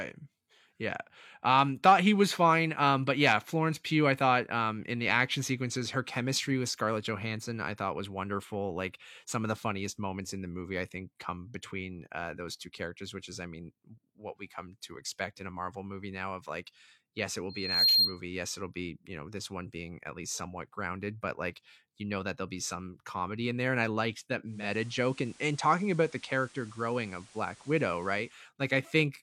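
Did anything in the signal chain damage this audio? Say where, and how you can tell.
Yes. From 17.49 to 18.21 s there is loudspeaker feedback squeal, arising acoustically at the capture stage: the microphone heard its own loudspeaker and the loop ran away at 4.2 kHz. The tone swells over roughly 0.3 s to about 10 dB above the speech, appearing on a spectrogram as one bright horizontal line.

From 24.44 to 28.45 s the reception stage shows digital radio blending to analogue: the receiver cross-fades over 287 ms to the FM broadcast. Level drops about 1 dB, and hiss about 25 dB down fills the spectrogram's floor.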